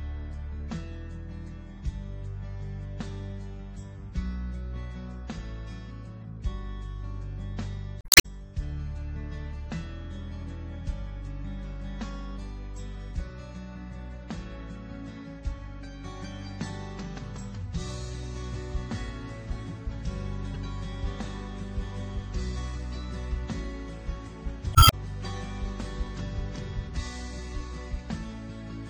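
Damaged data in a compressed stream causes glitches at 8.01–8.26 s, 20.54–20.56 s and 24.72–24.93 s (the last adding about 13 ms). These come from a decoder losing frame sync and searching for the next frame header.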